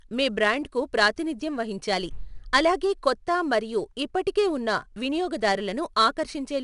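A 4-bit ADPCM compression stage runs throughout this speech recording, coding each sample as a coarse step from a predicted value, so the quantisation error rides up and down with the signal level. The damage is plainly audible as a gritty hiss clinging to every louder passage, with roughness on sharp onsets. Nothing reaches above about 10.6 kHz, which points to a sample rate near 22 kHz and leaves the top end dull.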